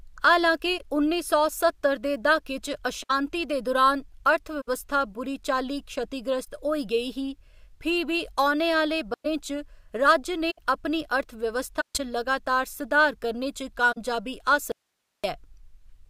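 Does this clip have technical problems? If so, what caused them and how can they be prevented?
Yes, there are two kinds of fault.

There are eight corrupt frames concealed, at 0.78–0.85, 3.02–3.11, 4.61–4.69, 6.44–6.48, 9.14–9.26, 10.50–10.59, 11.80–12.00 and 13.92–13.98 s. Each is where the AAC decoder covered damaged frames by muting them or with a scrambled copy of the last good spectrum. Protecting the stream with error correction or a more reliable link would prevent it.

There is an audio dropout to a faint residue from 14.72 to 15.24 s. The speech cuts abruptly for about 520 ms, leaving only hiss far below the signal. The likely cause is the source being lost while the path downstream stayed live. Securing that connection and monitoring for signal loss would prevent it.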